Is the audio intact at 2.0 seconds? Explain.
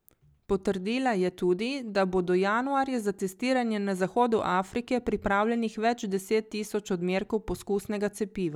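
Yes, the speech at 2.0 seconds is intact, with no fault heard at that moment.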